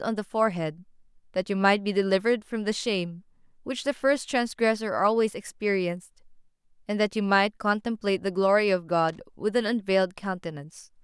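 A speech recording with a burst of loose connector crackle from 9.09 to 9.20 s: a worn or dirty contact keeps making and breaking, chopping the signal into irregular scratchy pops. Its ragged, uneven texture distinguishes it from a single clean click or a steady electrical buzz.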